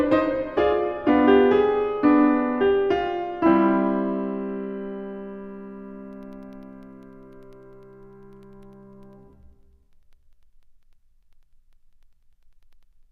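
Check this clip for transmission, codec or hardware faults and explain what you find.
A steady train of ticks runs through the music from 6.13 s to 13.03 s, one every 0.1 s (ten per second), around seventy in all. These are periodic USB or driver dropouts. Some background task stalls the USB bus or the audio driver at a fixed interval, and each stall drops a tiny slice of audio, only a fraction of a millisecond, replaced by silence. Each gap breaks the waveform abruptly, which is heard as a tick riding on the music.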